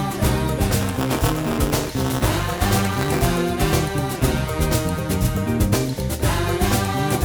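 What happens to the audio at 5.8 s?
Nothing goes wrong at 5.8 s; the audio runs through that moment intact, with no dropout, click or distortion.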